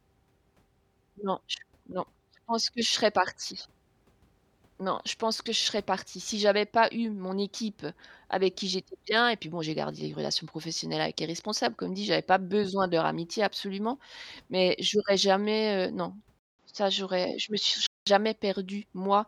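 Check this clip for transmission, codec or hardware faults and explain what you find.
One fault is present. From 16.39 to 18.07 s, just after "j'aurais jamais heu non", a 200 ms silence precedes dull, band-limited speech with nothing above 7.4 kHz, a modest level shift and faint new background noise, likely the input switched to a poorer device.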